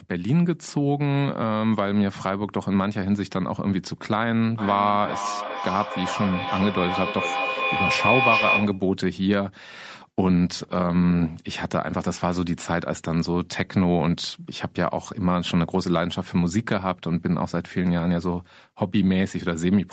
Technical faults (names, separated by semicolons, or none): feedback howl